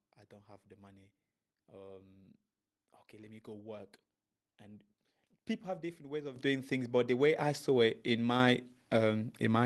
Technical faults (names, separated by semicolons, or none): microphone volume stepped up